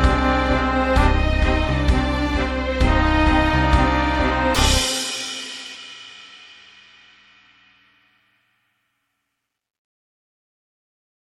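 A broken MP3 bit reservoir is the likely cause of two brief disruptions, at 4.53–4.56 s and 5.74–5.77 s, where the sound briefly breaks and jumps ahead. Each lasts about 30 ms, roughly one frame of 26.1 ms. When frames are dropped, the next frame reaches back into the reservoir for its borrowed data and decodes bytes belonging to a different frame, so the output stumbles and skips forward.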